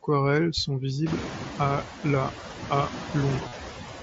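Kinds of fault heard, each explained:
Noise suppressor artifacts: throughout, a noise suppressor estimates the steady background and pulls down each frequency band it judges to be noise, frame by frame, here by about 6 dB. Most audible once the room noise swells from around one second on: the background dips in the pauses and comes back up beneath the speech.
Concealed Bluetooth headset packet loss: from 3.48 to 3.52 s, just after "à la à", roughly 45 ms of audio failed to arrive over the headset link, which fits a run of about six mSBC frames. The receiver covered the gap by repeating the closest-matching piece of the preceding waveform, so the hole is heard as a short buzzy, held tone at full level with a small warble where the real signal resumes.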